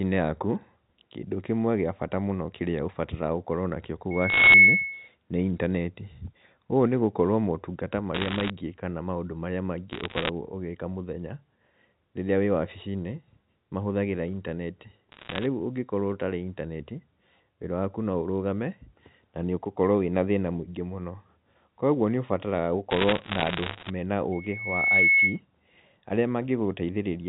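Just after "nakĩo kũu", at 4.11 s, loudspeaker feedback squeal begins. The microphone is picking up its own loudspeaker, and at 2.2 kHz the loop gain passes one. That single tone swells in under half a second to about 15 dB above the speech, then stops at 5.08 s. It returns from 24.32 to 25.40 s at the same 2.2 kHz, rising more slowly, over most of a second, to about 10 dB above the speech.

Inside the first squeal, from 4.30 to 4.54 s, there are bit errors on a digital phone line. Flipped bits change single samples in the A-law stream, and those that hit a high bit or the sign of a loud sample land as sharp ticks. More bursts of crackle follow at 8.15 to 8.50 s, after "nĩ gũkorwo motungata", then at 9.92 to 10.29 s, 15.12 to 15.46 s and 22.91 to 23.90 s. Around one to two bits in a hundred are wrong, and the speech underneath continues unchanged.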